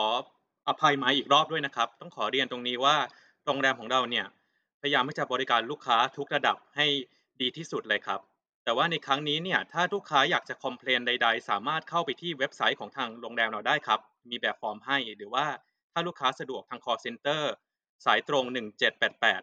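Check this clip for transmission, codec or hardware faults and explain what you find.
No faults detected in this recording.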